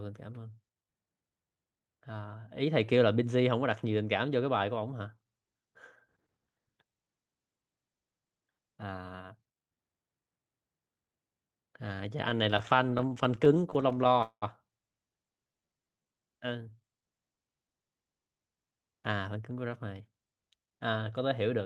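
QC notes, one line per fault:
12.29–14.44 s, repeated stalls (stutter): packets kept arriving late, so the jitter buffer ran dry about 30 times, each gap filled by stretching the last sound, 484 ms in all, longest 195 ms. Nothing is lost, unlike dropouts; the speech halts and restarts rather than skipping.
15.38–16.21 s, jitter buffer slow-down: to rebuild its reserve, the receiver repeated single pitch periods many times, adding 125 ms and playing at 86% speed. Pitch stays put, so it sounds drawn out, smooth rather than the choppy halts of a stall.
18.04–20.19 s, jitter buffer speed-up: the buffer held more than its target, so the receiver trimmed short pitch-period pieces again and again, removing roughly 300 ms and running at 111% speed. Pitch is unchanged, which separates this hurried delivery from a faster playback rate that would raise it.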